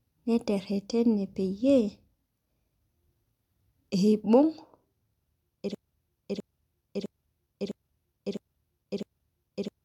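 At 5.75 s the speech locks into a broken-record loop: a 0.66 s fragment plays back to back six times, identical each pass, right through to the end. Likely the player or stream stalled and kept resending its last buffered piece, so the following audio is gone.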